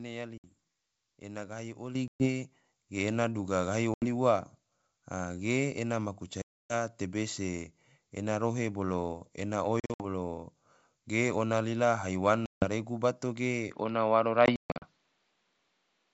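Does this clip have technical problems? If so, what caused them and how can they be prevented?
Yes. Packet loss on an ADPCM call hits at 0.38 s (60 ms), 2.08 s (120 ms), 3.94 s just after "duga gahi" (80 ms), 6.42 s (280 ms), 9.80 s just after "ena rohe bolo ena" (140 ms in short gaps spread over 200 ms), 12.46 s (160 ms) and 14.46 s (240 ms spread over 360 ms, longest run 140 ms). Each hole is hard-edged silence. Because ADPCM codes each sample as a difference from a running prediction with an adaptive step size, the receiver's predictor and step size drift from the sender's during the gap. The speech then comes back slightly distorted until the two resynchronise. A jitter buffer with packet loss concealment, or forward error correction on the network path, would prevent this.

A microphone volume step-up occurs at 1.95 s, right after "ena gahi". The speech and background both jump by about 8 dB in a single step. 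That is the call software deciding the input was too quiet and raising the device's input volume all at once, with no ramp. Disabling automatic input gain, or setting the microphone level correctly before the call, would prevent this.

Input switched to a poorer device applies from 13.72 s to the end. The speech there passes a narrower band, where the wideband G.722 sound earlier carried clearly up to 7 kHz. The tone turns duller and a faint new noise floor appears, though the level stays roughly the same and there is no gap at the changeover. This is likely the system moving to another microphone or a headset's narrowband call profile. Locking the input device in the system and call settings would prevent this.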